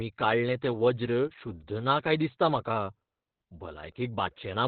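It's a short speech clip, and the whole thing has been through heavy Opus voice compression. There's nothing above about 4.5 kHz, so it sounds like a narrowband phone call, muffled and boxy. The excitation is coded coarsely, which makes the voice hoarse and a bit robotic from start to finish. That's typical of the SILK coder running near its bottom rate, and the damage fits something around 8 kbps with 20 ms frames.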